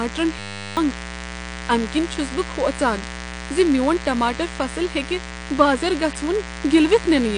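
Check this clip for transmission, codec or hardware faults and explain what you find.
Three faults are present: a mains buzz under the whole clip, a hang loop near the start, and codec damage throughout.

Mains buzz runs for the full length. It sits about 15 dB below the speech. Switching spikes leak in twice per 60 Hz mains cycle. They spread harmonics of 60 Hz well up into the kilohertz range. The result is a steady, raspy buzz.

A system hang loop occurs from 0.39 to 0.77 s. The driver stalled while the hardware kept replaying one 10 ms stretch of its buffer. That loop repeats 100 times a second. It sounds like a flat 100 Hz buzz replacing about 0.4 s of speech.

The audio is dull throughout. Nothing is present above 9.8 kHz. Sibilants sound fizzy and smeared, and the texture warbles. This is likely AAC compression at a low bitrate, around 32 kbps. The encoder lowers its cut-off and coarsely quantises what remains.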